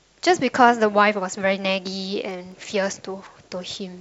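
Speech clip with CD scratch ticks from 2.31 to 2.72 s: three tiny sub-millisecond clicks, one per disc turn, where damage beat error correction and the player patched samples.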